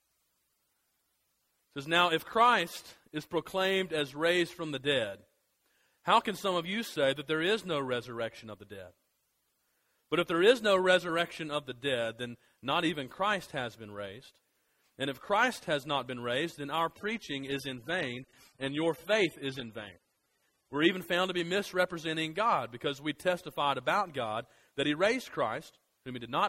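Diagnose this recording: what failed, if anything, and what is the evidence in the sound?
An adaptive stream at a lower bitrate played from 16.96 to 20.96 s. This is a network-stage fault: the connection slowed, so the player switched to a cheaper encoding for four seconds and then returned to full quality. In that stretch the treble drops away, with nothing above 13.1 kHz, and codec artefacts thicken. That fits a step from about 96 to 24 kbit/s AAC. On a spectrogram the upper band is sliced off flat for that block, with abrupt edges, while the waveform runs on without any gap.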